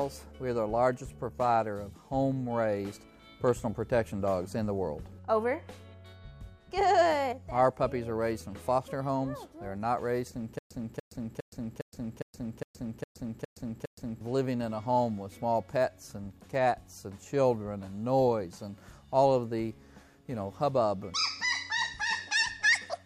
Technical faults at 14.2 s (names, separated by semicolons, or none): stutter with silent gaps